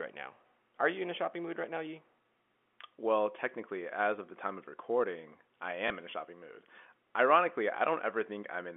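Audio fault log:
5.88 s, packet loss with last packet repeated: between "time of recording I" and "in a shopping mood" one 20 ms packet went missing and the previous one was replayed in its place, leaving a small blip, seen as a repeated waveform segment, all within the telephone band of the G.711 line.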